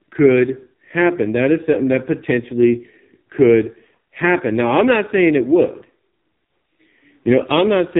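From start to finish, the speech carries heavy AMR narrowband mobile codec damage. Nothing above 3.8 kHz survives, so it sounds muffled and boxed in. The voice is buzzy and synthetic. That fits a low mobile rate near 5.9 kbps. Few bits remain to model each 20 ms frame.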